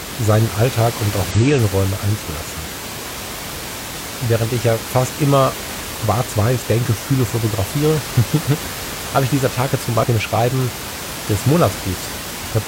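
Damaged data in a compressed stream shows up at 1.30 to 1.36 s after "und auch", at 5.99 to 6.04 s after "ich ja fast immer", and at 9.99 to 10.05 s. Each time, corrupted frames make the decoder lose sync and hunt for the next header, leaving a brief glitch.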